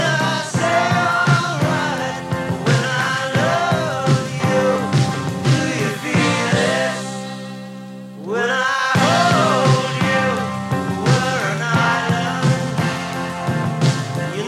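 No technical faults can be heard in this clip.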